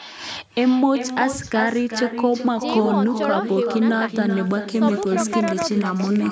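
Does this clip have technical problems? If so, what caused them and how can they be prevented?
Yes. Echo with no canceller runs through the whole clip. The speech comes back roughly 0.4 s later, about 8 dB quieter and thinner. The far end's loudspeaker fed its microphone. Turning on echo cancellation or using headphones there prevents it.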